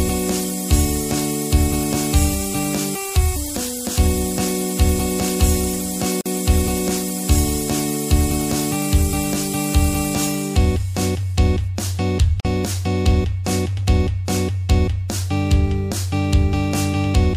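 A gap at a join of encoded pieces opens at 6.21 s and again at 12.40 s, each a silence of about 46 ms that cuts into continuous sound before it resumes exactly where it stopped. The audio was evidently encoded in separate pieces and butted together untrimmed, so each join keeps the encoder's leading delay and the padded final frame, leaving a dropout whose edges the codec smears.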